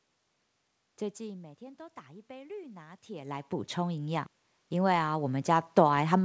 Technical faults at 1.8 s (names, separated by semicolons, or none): automatic gain rising